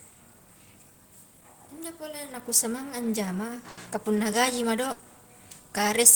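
At 3.69 s the speech stalls into a brief held, fading sound for about 80 ms before jumping ahead, and the same thing happens again at 4.92 s for about 70 ms. Both are a burst of packet loss: several packets in a row never arrived in time, so the receiver stretched the last sound it had and faded it down. When audio resumed, the stretch in between was gone.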